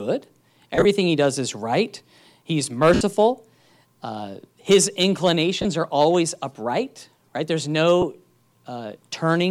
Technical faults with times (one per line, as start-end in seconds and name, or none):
0.75-0.85 lost LE Audio frames
2.94-3.01 lost LE Audio frames
5.62-5.65 lost LE Audio frames
8.02 lost LE Audio frames